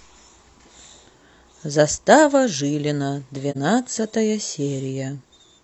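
At 3.51 to 3.57 s the speech falls into a brief dip: AAC frame loss with muting, where the decoder zeroed a missing frame, about 43 ms, pointing to one frame. Overlapping windows fade it out and back in.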